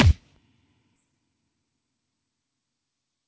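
At 0.96 to 0.98 s, a skip ahead: a run of audio was dropped while later audio was already queued, either lost in transit or thrown away when the jitter buffer overflowed. Roughly 0.7 s of the sound never plays, and nothing is put in its place. The two sides of the cut are butted straight together, so the sound lurches forward with an abrupt splice and no audible gap.

From 1.06 to 1.99 s comes a jitter buffer speed-up. The buffer was still holding more audio than its target after the backlog, so the receiver trimmed it down by removing many short slices of one or a few pitch periods in succession, around 150 ms in all. Playback runs at about 113% of normal speed while the pitch stays the same. That stretch sounds rushed and slightly compressed in time.

The call codec path itself carries nothing above 8 kHz, which fits G.722 at 64 kbps, and its usual coding noise sits under the whole clip.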